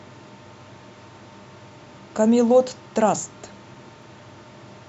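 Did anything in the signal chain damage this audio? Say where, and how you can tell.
Yes, at the playback stage: CD scratch ticks, five regular clicks between 3.22 and 4.29 s, about four or five a second, the longest about 1.5 ms. A scratch defeats error correction once per revolution. They appear as thin vertical broadband spectrogram lines and waveform blips.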